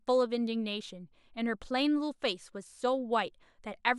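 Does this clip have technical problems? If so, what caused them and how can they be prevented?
No, there's nothing technically wrong to hear in this one, so there's nothing to fix or guard against here.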